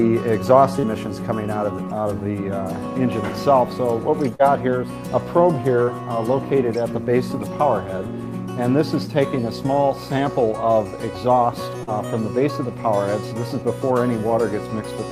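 Four moments of short concealed packet loss occur, at about 0.79, 4.35, 5.83 and 11.83 s. Each time roughly 40 ms of the stream failed to arrive at the decoder in time, and the receiver patched the gap by extending the preceding sound for about 40 ms before crossfading into the real signal again. Each loss is heard as a brief smear or wobble lasting under a tenth of a second, and any short sound falling inside the gap can drop out.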